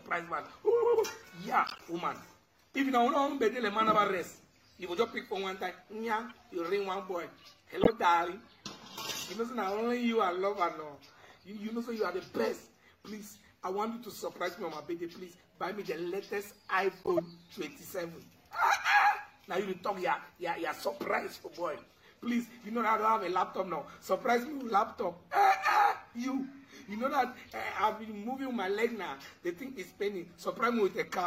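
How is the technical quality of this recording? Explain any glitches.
The recording is marred by five brief decoding glitches. Corrupt frame decoded errors occur at 1.67–1.81 s, 6.29–6.32 s, 7.81–7.89 s, 17.03–17.20 s and 21.77–21.80 s. In each case, damaged bits in a compressed frame were decoded instead of discarded, so misread gains and codes put energy at the wrong frequencies for one to seven frames. The result is short chirps or noise bursts, loudest at 7.8 s (about −10 dBFS) and faintest at 6.3 s and 21.8 s (about −40 dBFS).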